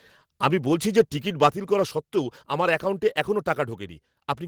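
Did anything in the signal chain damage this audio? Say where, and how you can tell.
Yes. At 0.98–1.01 s, after "আমি বলছি", and 1.43–1.47 s, before "করা সত্ত্বেও", peaks crackle harshly, flattened about 3 dB past full scale. This is likely microphone overload at the converter.

At 1.5 s, right after the second distorted peak, voice and background drop together by about 4 dB, a microphone volume stepped down, likely by call processing reacting to the clipping.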